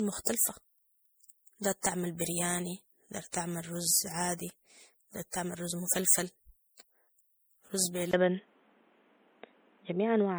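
From the start, the speech has a swirly, hollow, smeared quality with softened consonant attacks. This is generation loss, likely from repeated MP3 encoding at 64 kbit/s, around four passes. Each pass requantised on a shifted frame grid. On a spectrogram, holes and blotchy patches accumulate in the upper bands.

At 8.11 s there is a silence of about 20 ms, visible as a brief flat gap in the waveform. Then the input switched to a poorer device, likely a different microphone or a headset call profile, and the sound turns dull and boxy until the end. The spectrogram shows a hard ceiling at 3.8 kHz with nothing above it. The level shifts by about 5 dB, and a new noise floor sits about 35 dB below the speech.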